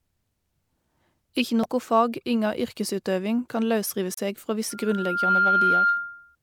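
Damaged data in a compressed stream at 1.63–1.65 s, just before "fag inga yrkesutøving kan", and at 4.14–4.18 s: the decoder misreads corrupted frames and resyncs, giving short glitches. Loudspeaker feedback squeal from 4.70 to 6.36 s: a 1.4 kHz tone swells over roughly 0.7 s to about 5 dB above the speech, as the mic-to-speaker loop exceeds unity gain.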